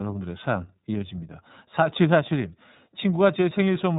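From start to end, the speech carries iLBC codec damage that is plainly audible. The band stops at about 3.9 kHz, so the speech sounds narrow and muffled, with no sibilant sparkle. Because each frame's excitation is coded on its own, the voice takes on a rough, slightly synthetic grain. The framing fits the 30 ms, 13.33 kbps mode of this narrowband VoIP codec.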